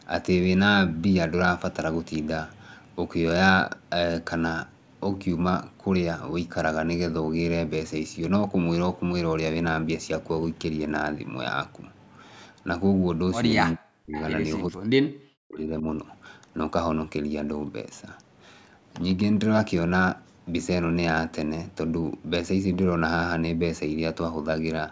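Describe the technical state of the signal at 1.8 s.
At 1.8 s the speech signal is intact, with no dropout, distortion or other fault, only the expected narrowing from call microphone processing, which removes the lowest bass and leaves nothing above 8 kHz.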